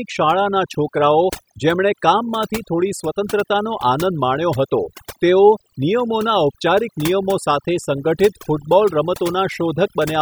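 Overdone noise removal runs throughout: noise reduction set too strong cuts bands near the noise estimate, leaving twinkling specks in near-silence.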